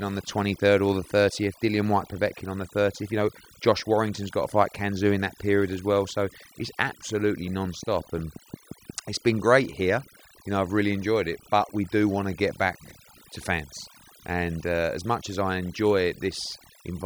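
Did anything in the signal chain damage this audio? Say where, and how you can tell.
Yes. Overdone noise removal runs the whole way through, from a suppressor set too hard. It gates whole bands, leaving near-silent gaps with twinkling specks.

A train of clicks runs from 7.48 to 8.91 s, after "it's absolutely" and before "it's been great here". There are about ten regular ticks at 5.6 per second, peaking about 5 dB above the speech, likely interference at the analogue or interface stage.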